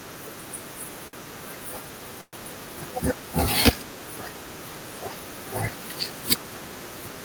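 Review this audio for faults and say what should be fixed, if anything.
A short stall from a late packet occurs at 1.07–1.16 s. One packet arrived after its playout time, the jitter buffer ran dry, and the receiver stretched the last speech sound by 56 ms, so it is held audibly too long. Nothing is lost, but everything after runs 56 ms late. A deeper adaptive jitter buffer would absorb this.

A call audio freeze runs from 2.21 to 2.36 s, most likely because packets were held up in transit and the jitter buffer emptied. The last sound continues as a fading buzz or hiss and then 50 ms of silence, inserting 118 ms of gap. Speech then resumes where it stopped, with nothing missing. Better network queueing and buffer headroom would prevent this.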